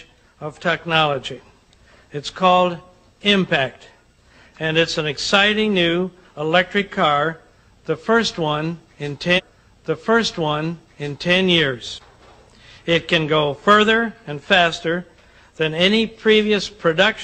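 At 9.34 s, roughly 2.0 s of audio plays again through 11.34 s, with a blip at the jump back: a stream segment repeated, fetched or queued twice.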